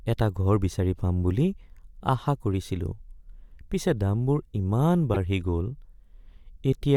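At 5.14 to 5.16 s the speech is interrupted by damaged data in a compressed stream: corrupted bytes make the decoder misread a frame and lose sync, producing a short glitch. A spectrogram shows a narrow vertical disturbance; the waveform, an abrupt discontinuity.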